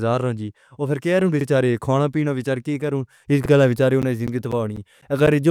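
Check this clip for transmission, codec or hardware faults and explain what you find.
Two faults are present in this speech clip: repeated audio at the chunk joins, and regular dropouts near the end.

Overlapping chunks occur at 1.41 to 1.46 s and 3.46 to 3.50 s. Each 2 s chunk starts 44 ms before the previous one ended, so that slice plays twice. It sounds like a brief stutter. The waveform shows a duplicated segment with a discontinuity at each join.

Periodic USB or driver dropouts begin at 4.02 s and recur every 0.25 s until the end. A blocked bus or driver loses a little audio each time, and the gap is filled with silence. They sound like regular ticks. A spectrogram shows thin, evenly spaced vertical gaps, with a broadband click at each edge.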